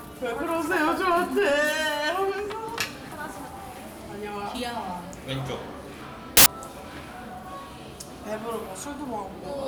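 From 6.37 to 6.46 s, a burst of loud, harsh broadband noise replaces the audio. These are samples built from the wrong bytes: misassembled values turn fast-changing low bits into each sample's largest part.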